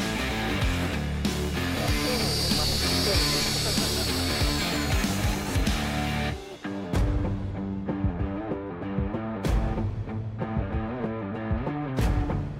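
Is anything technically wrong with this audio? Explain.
No, nothing technically wrong can be heard here.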